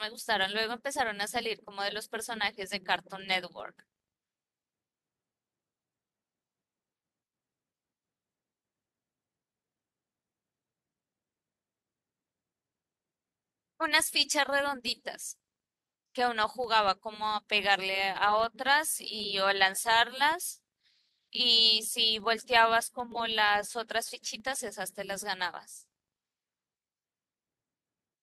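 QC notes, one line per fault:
Throughout: filter restarted on every block. A steady buzz at 25 Hz runs under the speech and rises and falls with its level, louder on strong passages and fading in pauses. The filter loses its memory at each block boundary and starts again from silence, so every block opens with a small transient. Those clicks arrive 25 times a second, which points to blocks about 40 ms long, and they fuse into a buzz rather than separate ticks.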